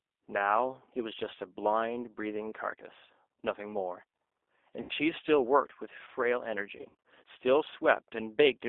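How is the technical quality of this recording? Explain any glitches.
The recording is low quality, with plainly audible codec damage throughout and two concealment glitches.

The whole clip has G.729 codec coloration, consistent with 8 kbit/s G.729A. The speech is rebuilt from a filter, pitch predictor and sparse pulses, so it sounds rough and slightly synthetic. On a spectrogram, energy sits between 300 Hz and 3.6 kHz with nothing above.

VoIP packet loss concealed by the speech codec appears at 4.81–4.93 s, where 80 ms went missing, which fits four lost packets. It recurs at 6.77–7.03 s, where 180 ms was lost in scattered gaps over 280 ms, the longest gap 60 ms. The decoder stretched its last pitch and filter while lowering gain, giving a sound that fades. On a spectrogram this shows as smeared, flat energy. The waveform shrinks, and the voice stays weak or distorted for tens of milliseconds or more after each gap.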